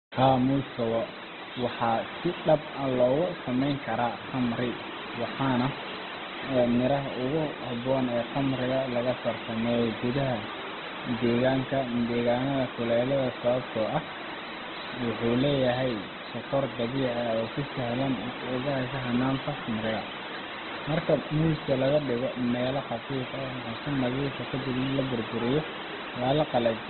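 Throughout, heavy Opus compression, likely at a very low bitrate near 12 kbps, strips everything above 4.2 kHz, leaving the speech muffled, rough and grainy.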